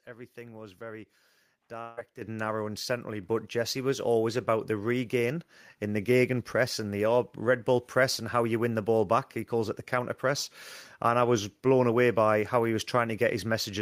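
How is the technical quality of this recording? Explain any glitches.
The recording has two kinds of fault: a long network dropout near the start, followed by two sudden upward jumps in microphone level.

From 1.81 to 1.99 s, just before "narrow and centrally", there is what sounds like a long network dropout, likely caused by a stretch of audio packets never reaching the receiver. The receiver covered the gap by extending the last sound it had, so for about 155 ms there is a fading buzzy continuation rather than silence. About 160 ms of real speech is lost, and the audio resumes beyond that missing piece.

The microphone volume stepped up twice. Each time the call software judged the input too quiet and raised the device gain in a single step. At 2.22 s, just before "narrow and centrally", the level jumps by about 9 dB. At 3.24 s, right after that phrase, it rises by another 4 dB or so. 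Both times the voice and the background noise get louder together, abruptly rather than gradually.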